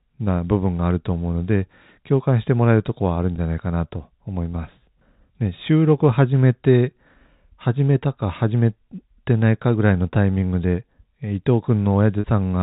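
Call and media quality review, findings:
Packet loss with pitch repetition, 3.36–3.38 s and 12.20–12.24 s: receiver concealment repeats the last pitch period, giving a brief held buzz over 20 ms then 40 ms gaps, consistent with one and two lost packets; G.711 band-limited to 4 kHz.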